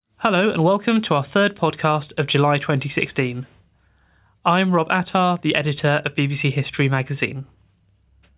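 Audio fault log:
No faults detected in the speech recording.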